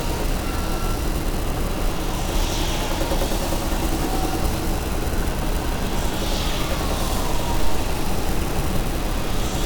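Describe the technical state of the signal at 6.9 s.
At 6.9 s the signal is intact, with no audible dropout, distortion or other fault in the sound at that point.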